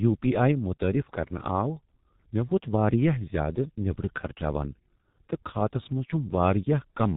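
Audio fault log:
Throughout: G.723.1 codec. The speech sounds heavily muffled and hoarse, with a boxy, band-limited tone and smeared consonants that lose their edges. Nothing above 4 kHz survives, which flattens sibilants and crisp onsets. The roughness and blurring fit a very low bitrate near 6.3 kbit/s, where the codec rebuilds the voice from a coarse model refreshed only every 30 ms frame, so fast changes between sounds are averaged away.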